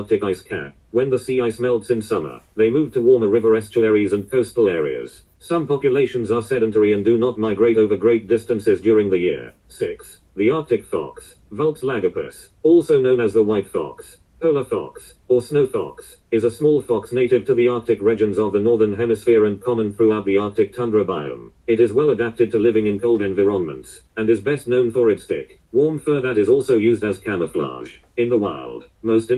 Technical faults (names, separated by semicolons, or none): none